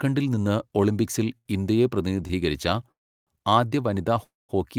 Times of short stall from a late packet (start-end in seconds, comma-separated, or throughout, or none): 1.37-1.47, 2.27-2.31